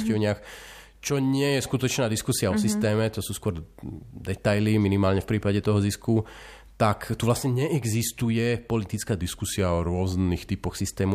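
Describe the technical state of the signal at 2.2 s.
At 2.2 s the speech signal is intact, with no dropout, clipping, glitch or other technical fault.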